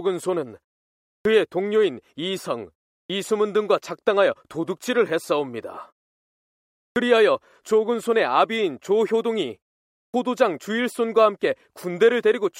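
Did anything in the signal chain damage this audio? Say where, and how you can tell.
Yes, a clipped start after a pause at the playback end. After gaps of 0.39 to 1.08 s, speech jumps in abruptly with its onset gone at 1.21, 3.06, 6.92 and 10.10 s, each time losing 36 to 42 ms. The output device sleeps through silence and wakes late.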